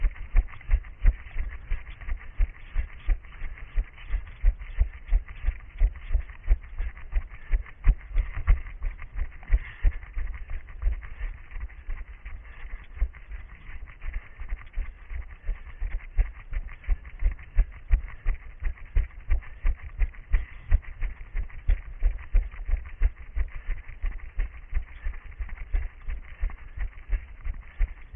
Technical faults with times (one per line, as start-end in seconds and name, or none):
none